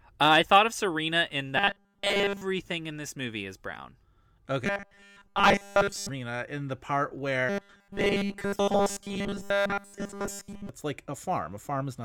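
Speech with robotic sound from repeated short buffers at 1.57–2.41 s, 4.65–6.09 s and 7.49–10.69 s (before "it's like"): a rigid 200 Hz buzz, likely from a 5 ms buffer being replayed.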